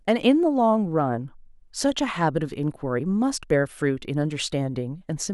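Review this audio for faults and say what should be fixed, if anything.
Nothing needs fixing, as no faults can be heard in this speech recording.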